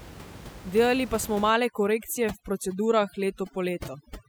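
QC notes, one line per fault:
1.50–4.28 s, overdone noise removal: after "pa smo" the noise reduction clamps down hard, gating individual frequency bands near its noise estimate. The room noise, about 16 dB below the speech, drops and breaks up into twinkling specks, and quieter speech components vanish.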